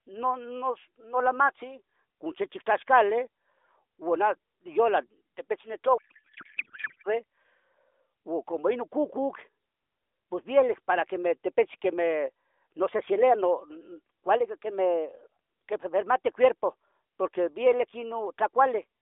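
From 5.98 to 7.14 s a codec payload misread turns the AMR-NB speech into garbled noise and warble that barely tracks it, which fits octet-aligned AMR frames being unpacked as bandwidth-efficient. On a spectrogram the harmonics dissolve into smeared energy.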